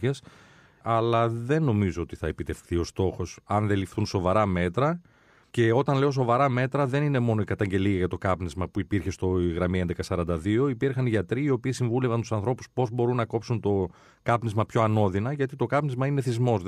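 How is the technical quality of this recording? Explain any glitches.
No technical glitches can be heard anywhere in the recording, and the speech signal stays continuous and stable throughout.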